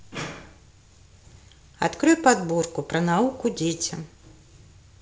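No technical faults occur in this speech recording at any point.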